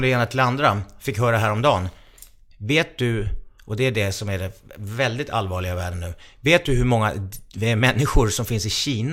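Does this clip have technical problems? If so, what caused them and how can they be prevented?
No, this speech clip has no audible technical problems. There is nothing to trace back to a cause, so nothing needs preventing.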